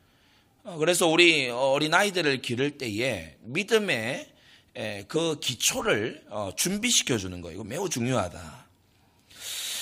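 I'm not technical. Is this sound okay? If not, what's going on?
No. At about 5.15 s the speech gives a tiny hiccup: the sound seems to jump forward slightly, like a skipped moment. This is called compressed frames skipped. The file is stored in small chunks, and here roughly one chunk was missing or rejected as damaged, so about a fiftieth of a second was never played.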